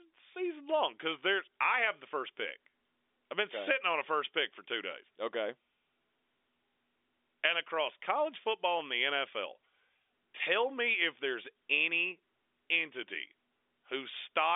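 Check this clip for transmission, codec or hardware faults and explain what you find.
Nothing in this speech clip points to a transmission, codec or hardware fault; it's simply G.711 telephone coding doing its usual job, with the sound held to the phone line's band of roughly 300 Hz to 3.6 kHz and nothing audible above 3.7 kHz.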